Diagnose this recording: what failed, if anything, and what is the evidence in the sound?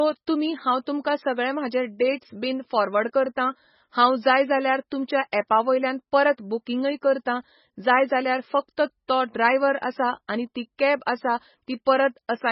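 Codec stage: likely MP3 compression, heavy throughout, with nothing above 5.6 kHz and watery, swirling speech, unlike a clean low-pass, which fits a bitrate near 16 kbps.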